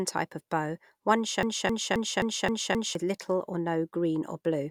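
From 1.43 to 2.95 s the speech falls into a broken-record loop. A 264 ms fragment repeats six times back to back, likely from a stalled stream.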